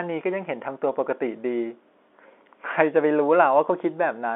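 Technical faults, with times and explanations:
No technical faults heard.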